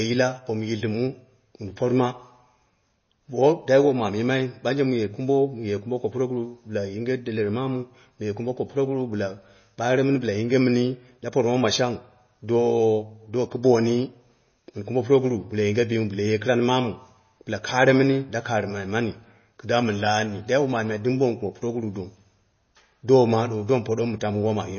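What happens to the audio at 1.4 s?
At 1.4 s the speech carries MP3 compression, as it does throughout the clip. Nothing survives above about 6.6 kHz, and weak frequency lines flicker on and off between frames, giving a watery, swirly texture with chirpy s sounds. A steady low-pass filter would dull the treble without this flickering, which points to a likely low bitrate near 24 kbps.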